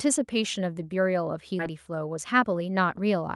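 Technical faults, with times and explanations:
1.59 to 1.70 s, skip ahead. Playback jumps forward with almost no gap. Roughly 0.7 s of the speech never plays, and the sound on either side is butted together. Later audio was already queued when this stretch was lost in transit or thrown out by an overfull jitter buffer. The receiver simply moved on. That is why the delay shrinks by about the same amount and the join sounds abrupt.
2.15 to 2.52 s, jitter buffer speed-up. The speech runs about 9 percent fast, at 109 percent speed, and sounds hurried, yet the pitch stays put. The receiver's jitter buffer was holding more audio than its target. To trim that backlog it cut many tiny slices, one or a few pitch periods each, in quick succession. Together they remove only a few tens of milliseconds. The Opus call path's coding noise and its top end near 12 kHz sit under both events.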